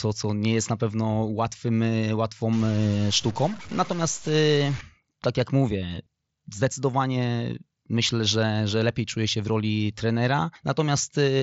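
From 2.53 to 4.81 s, ending just before "tak jak mówię zdecydowanie", the speech turns distorted and the pauses fill with hiss. This is a stuck bit, likely from a faulty converter or data line. On the waveform, samples are offset by a fixed step. The spectrogram shows broadband noise up to the 7.7 kHz ceiling of the mSBC headset link.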